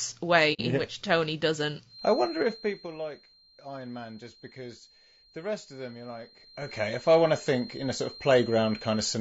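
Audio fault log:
Throughout: low-delay AAC compression. The speech sounds rough and grainy, with a hiss filling the gaps between the harmonics and a thin, synthetic-sounding top band. The damage is plainly audible and points to AAC-ELD at about 32 kbps. Its short frames resolve pitch harmonics poorly, and at that rate too few bits remain for the fine spectral detail. Unlike broadband background noise, the grain tracks the speech and disappears in pauses, which makes the codec the likely cause.
0.53–0.61 s: AAC frame loss with muting. The sound briefly drops to silence for about 60 ms, which fits two consecutive lost frames whose spectrum the decoder set to zero. The overlapping windows fade the sound out and back in across the gap, so the hole has soft edges. A hard dropout or packet-loss glitch would instead start and end abruptly, often with a tick.
1.84 s to the end: feedback whistle. 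A thin, steady tone at 4.2 kHz sits about 20 dB below the speech and swells and fades slowly in level without growing. This points to a loudspeaker-to-microphone loop held just short of instability, the likely cause. It is a single pitch that persists through pauses and never runs away into a howl. That separates it from codec hiss, which carries no fixed pitch.
2.20–2.92 s and 6.36–6.72 s: zipper noise. The first change lowers the level by about 15 dB and the second raises it by about 15 dB, both in 3 dB steps with no smoothing. Each step leaves a small click, heard as ticking at roughly 7 per second in the first run and 15 per second in the second. These moves have an audible grain that rides only on the change itself.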